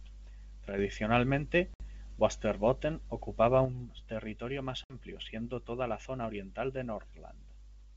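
From 0.69 to 0.79 s the level dips by about 6 dB and snaps back, likely because one channel drops out briefly before the mono sum. At 1.74 s there's packet loss on an ADPCM call: a hard-edged 60 ms silent gap, a few packets' worth. The decoder then comes back out of step with the sender, giving some grit before it settles. From 3.65 s to the end the same drop of about 6 dB returns and stays, likely a channel going missing again. At 4.84 s another 60 ms hole lands, followed by the same rough recovery.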